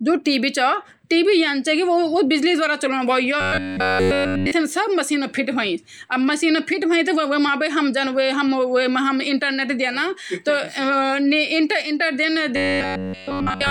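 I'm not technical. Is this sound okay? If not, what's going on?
No. Twice the speech turns into a stiff, metallic, robot-like buzz: from 3.41 to 4.51 s, and again from 12.56 s to the very end at 13.70 s. It keeps the rough rhythm of the talking but loses its natural tone. This is robotic sound from repeated short buffers. The likely cause is that new audio stopped arriving in time, so the software kept replaying its last tiny slice, about 11 ms long, and the real sound was skipped. That repetition forces a fixed hum at about 94 Hz.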